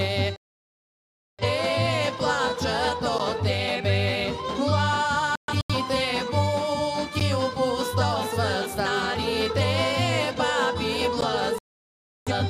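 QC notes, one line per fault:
0.36–1.44 s, digital broadcast dropout: the receiver loses good frames and mutes for about 1 s. Everything sent in that stretch is gone rather than delayed, and the run of lost audio fits frames of roughly 43 ms each.
5.36–5.75 s, digital broadcast dropout: intermittent frame failures leave several short muted holes scattered over about 0.34 s. They total about 0.21 s of lost sound, and the longest single hole is 128 ms, so the sound stutters rather than stopping once.
11.58–12.32 s, digital broadcast dropout: another muted stretch of about 0.7 s before good frames return. The missing sound is not recovered, so the audio resumes further along than where it cut.
3.18 s, 7.20 s, 11.21 s, gap between chunks: a 12 ms hole recurs every 4 s at each join between stored chunks. It points to padding or late chunk starts. No sound is lost, but the sound is briefly interrupted at each join.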